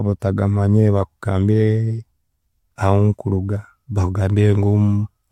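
No technical faults are audible anywhere in the recording.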